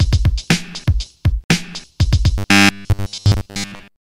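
Robotic sound from repeated short buffers runs from 2.38 s to the end of the clip. The sound loses its natural movement and becomes a rigid, metallic buzz pitched at 100 Hz, which still loosely tracks the shape of the original audio. The likely cause is fresh audio arriving too seldom, so playback fills most of the gaps by looping a 10 ms chunk again and again while the real material is skipped.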